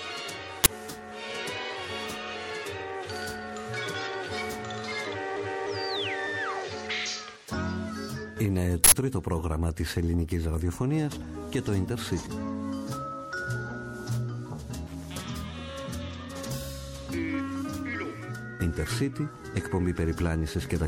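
A harsh, loud crack and a burst of digital noise cut through the audio: a 20 ms one at 0.64 s and an 80 ms one from 8.84 to 8.92 s. Classic uninitialised buffer, where blocks played before audio was written, so stale memory came out as samples.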